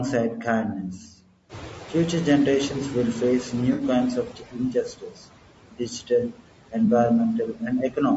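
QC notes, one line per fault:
Throughout: noise suppressor artifacts. The background drops about 18 dB in the gaps and swells back under the speech, frame by frame.
Throughout: low-delay AAC compression. Plainly audible roughness and graininess, with noise sitting between the harmonics and a synthetic-sounding top end up to the 8 kHz ceiling. It's likely AAC-ELD at around 32 kbps.
0.93–1.34 s, 4.25–5.24 s, 5.72–6.11 s, 6.29–6.43 s and 7.47–7.62 s: speech cut by the noise suppressor. The suppressor mistook bits of speech for noise, pulling them down about 17–19 dB (only about 12 dB at the last one). The cut parts sound swallowed or faint, with the longest patch around 4.3–5.2 s.
1.49–4.34 s: noise suppressor catching up. The room noise jumps about 12 dB around 1.5 s, and the noise estimate lags, so the louder noise comes through underreduced at first. It sinks gradually over nearly 3 seconds until the suppressor is back to cutting about 12 dB.
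3.73–3.83 s and 6.85–6.88 s: AAC frame loss with concealment. The decoder papered over the missing audio using the last good spectrum, giving a smeared, noisy or phasey blip. The first is about 60 ms, which fits three lost frames. The second is about 20 ms, fitting one.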